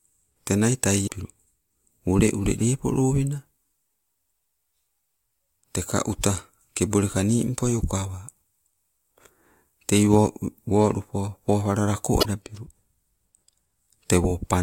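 Speech, with one fault: damaged data in a compressed stream from 1.03 to 1.1 s. Corrupted bytes there make the decoder misread those frames and lose sync until it finds the next valid frame header, producing a brief, roughly 70 ms disturbance: a chirp, squawk, click or short hole.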